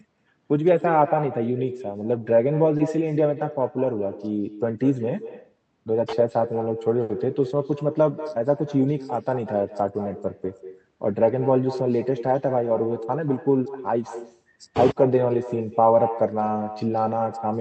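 Throughout the clip there is echo with no canceller: the far end's loudspeaker feeds its microphone and nothing subtracts it, so the speech returns after the network round trip. Each phrase is shadowed roughly a fifth of a second later by a thinner copy about 13 dB down.

At 2.77 to 2.81 s, short concealed packet loss: about 20 ms of audio never arrived in time, and the decoder bridged the gap by extending the preceding sound for 20 ms before blending back. It registers as a brief smear or wobble in the speech.

At 7.03 to 7.11 s comes a burst of packet loss, roughly 60 ms gone in a row. The receiver stretched the last sound over that stretch while fading it down, giving a short held buzz or dying hiss, then the speech picks up with 60 ms of content skipped.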